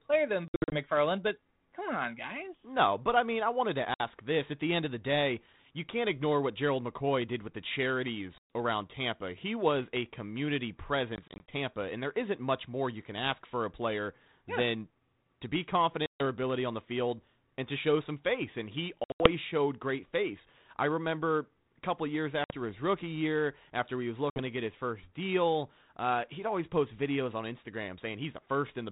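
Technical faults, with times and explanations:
0.48–0.77, 3.94–4.05, 8.38–8.47, 11.16–11.56, 16.06–16.21, 19.04–19.28, 22.44–22.55 and 24.30–24.40 s, packet loss on an ADPCM call: hard-edged silent gaps of 60 to 180 ms, broken into short dropouts at 0.48, 11.16 and 19.04 s. The speech comes back with some roughness. The lost packets were filled with silence, and the decoder's adaptive prediction and step size drifted away from the sender's. They take a few tens of milliseconds to line up again.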